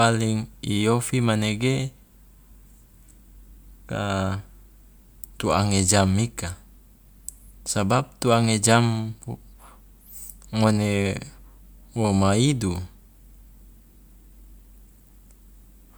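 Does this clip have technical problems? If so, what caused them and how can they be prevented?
No, this clip has no technical problems, so there is nothing to prevent.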